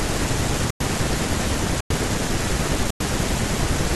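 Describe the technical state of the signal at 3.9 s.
At 3.9 s the signal is intact, with no audible fault in the speech at that point.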